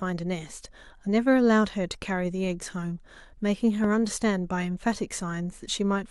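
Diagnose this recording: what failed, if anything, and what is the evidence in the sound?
A single loud pop sits on the speech from 3.84 to 3.86 s, peaking roughly 10 dB above the surrounding signal while the speech continues beneath it. The likely cause is a voltage step in the analogue wiring, such as a plug or switch transient, which the following circuits shape into this brief pulse.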